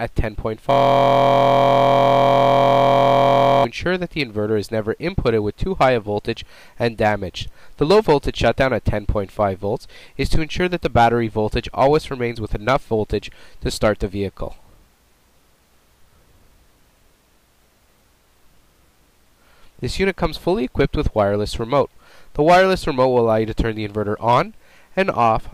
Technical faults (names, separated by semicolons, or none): system hang loop